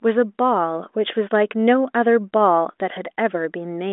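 Speech with no technical fault to be heard. It runs through G.726 ADPCM, which at 40 kbit/s leaves at most a faint trace of coding noise, and the telephone line band of roughly 250 Hz to 3.6 kHz means nothing is heard above about 3.8 kHz.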